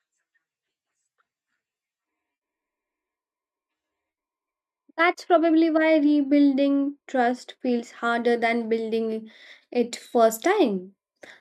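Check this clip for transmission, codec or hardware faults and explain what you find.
One fault is present. De-emphasis applied wrongly, from 4.60 to 7.96 s, just before "than building it": a treble-cutting filter acted on speech that had no pre-emphasis, or was applied twice, tilting the response down smoothly to about 8 dB lower at 10 kHz than at 1 kHz, leaving that stretch dull and muffled.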